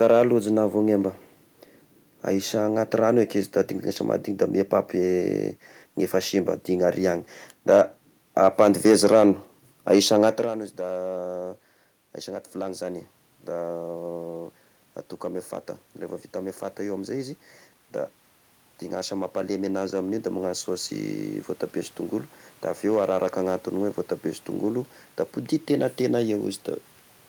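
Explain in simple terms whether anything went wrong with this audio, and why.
Yes, two things went wrong. The first is hard clipping, and it runs through the whole speech clip. The loudest moments were a bit too big for the recording chain, so their peaks got sliced flat. Only a small fraction of the audio is affected, so you hear it as brief crackle on the punchiest syllables rather than constant fuzz.

The second is the automatic gain rising from about 16.3 s to 26.5 s. The level control decided things were too quiet and slowly turned itself up over those ten seconds. Voice and room noise swell together, which is how you can tell it's the gain control and not the talker.

The level change around 10.5 s is just the talker shifting position at the mic.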